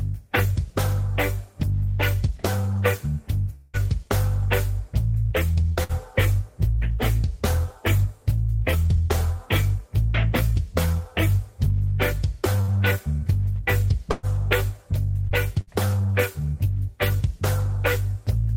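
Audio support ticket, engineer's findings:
Long network dropout likely, 3.55–3.77 s: about 180 ms of packets never arrived. Concealment stretched the last sound into a fading buzz or hiss, no silence, then audio resumes past the gap.

Burst of packet loss at 5.83, 12.61, 14.11 and 15.61 s: 60 ms lost each, 120 ms at 14.11 s. Concealment holds and fades the last sound, then audio skips ahead.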